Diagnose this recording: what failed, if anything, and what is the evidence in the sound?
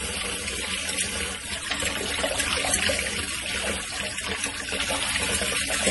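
The fault sits at the codec stage and runs through the whole recording. Nothing is left above 11.5 kHz, so the top end stops at a hard ceiling. The damage is heavy. Weak detail flickers in and out, giving a watery, swirling texture, and transients smear. This is likely MP3 compression at a low bitrate, around 32 kbps. Short of bits, the encoder drops the treble and zeroes quiet frequency lines frame by frame.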